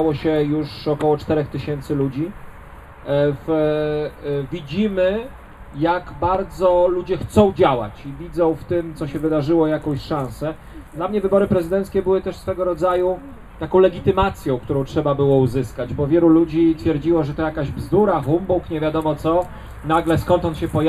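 The whole clip sounds hollow and thin at the top because of channel delay (comb filtering). One channel trails the other by roughly a tenth of a millisecond, a few samples. Summed to mono, the shared sound cancels near 5 kHz and at evenly spaced frequencies above it. Two loud pops sit on top of the audio, which carries on beneath them. The first runs from 6.35 to 6.37 s and peaks about 5 dB above the sound. The second runs from 14.22 to 14.25 s and is louder, about 10 dB above. Each is a single sharp hit. A sudden voltage step from a plug, switch or static discharge is the likely cause.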